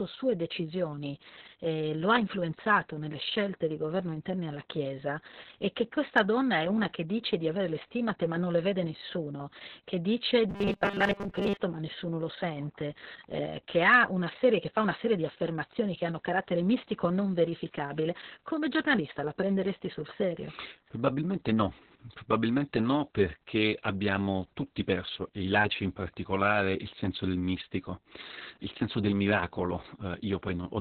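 From the start the speech carries heavy Opus voice compression: a very low-rate SILK narrowband coding that leaves nothing above about 4 kHz. The voice sounds muffled, hoarse and a bit robotic, because the excitation is coded so coarsely at around 6 kbps.

From 10.49 to 11.57 s, between "vede nessuno che dice" and "ma nessuno lo sente", you get a robotic sound from repeated short buffers. The voice collapses into a rigid metallic buzz at 200 Hz that only loosely follows the speech, with most of that stretch being repeats. The likely cause is the playback repeating a 5 ms buffer while the real audio is skipped.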